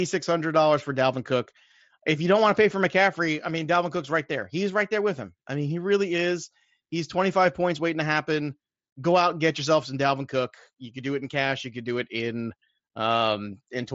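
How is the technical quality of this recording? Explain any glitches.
No glitches or faults heard.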